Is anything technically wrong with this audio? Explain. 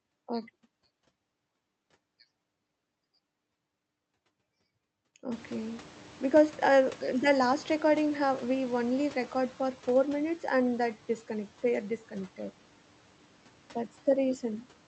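Yes. A noise suppressor catching up can be heard from 5.31 to 9.34 s. Around 5.5 s the room noise jumps by about 23 dB. The suppressor's estimate of that noise falls behind the jump. The new noise therefore passes with less reduction at first. Over about 4 s the estimate adapts, and the noise sinks by about 5 dB. It settles just before "for four minutes and". The call path limits the band to roughly 8 kHz throughout.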